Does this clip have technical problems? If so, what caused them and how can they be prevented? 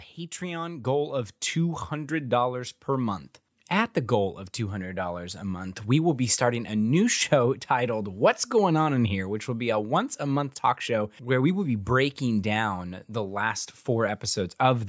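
Yes. From 0.38 to 2.86 s there is automatic gain rising: the call's gain control judged the input too quiet and raised its gain by about 8 dB over roughly two and a half seconds. The speech and the background noise swell together, which separates it from a talker moving closer to the microphone, where only the voice would grow. The call's normal microphone processing limits the band to 8 kHz. Prevent it by setting a proper input level beforehand or disabling automatic gain control.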